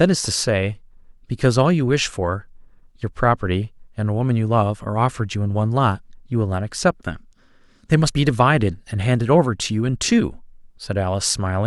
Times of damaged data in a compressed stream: none

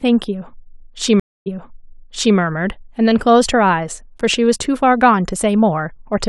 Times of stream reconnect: 1.20-2.36

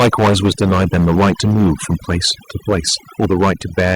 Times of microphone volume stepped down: 3.25

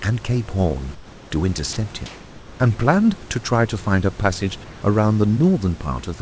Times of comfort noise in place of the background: 0.95-1.31, 2.06-2.60, 4.64-4.82

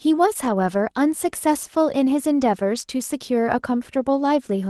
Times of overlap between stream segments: none

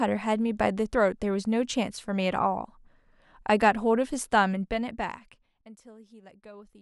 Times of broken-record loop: none

